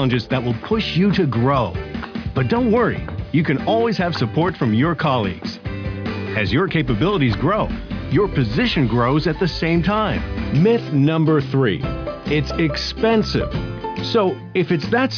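Nothing here stands out as a technical fault; the audio runs along without any glitch worth pointing to.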